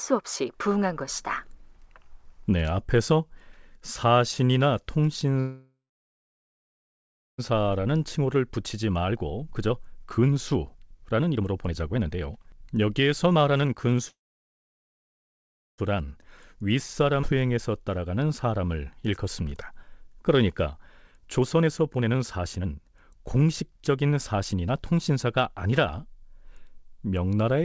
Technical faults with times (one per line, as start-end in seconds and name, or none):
5.40-7.40 call audio freeze
7.52-14.00 jitter buffer speed-up
14.08-15.80 call audio freeze
15.91-18.60 jitter buffer speed-up
17.22-17.25 skip ahead
20.09-26.53 jitter buffer speed-up